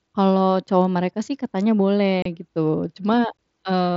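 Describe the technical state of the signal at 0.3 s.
At 0.3 s the speech passes intact, carried through the wideband Bluetooth mSBC headset path with its band limit at 8 kHz and no dropout, click or distortion at that moment.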